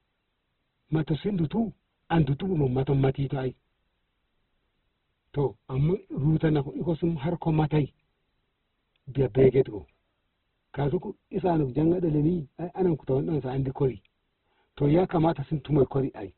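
Opus compression throughout: nothing above 4.2 kHz, and the speech turns grainy and rough, likely from Opus in music mode filling starved bands with noise at around 12 kbps.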